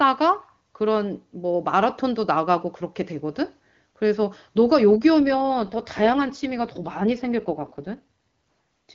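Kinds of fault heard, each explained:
AMR rate drop: From 5.20 to 8.04 s the speech turns rougher and more synthetic, then clears again. The sound fits the wideband AMR codec being pushed from 23.85 kbit/s down to around 8.85 kbit/s to free bits for error protection on a weak link. Unlike a fallback to narrowband, the upper band stays present. Unlike packet loss, nothing drops out. Only the coding quality degrades for that stretch.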